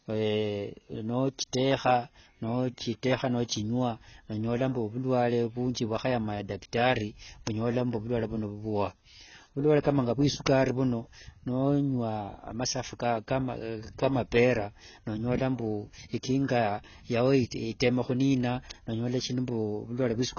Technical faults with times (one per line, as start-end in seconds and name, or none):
0.00-20.39 AAC compression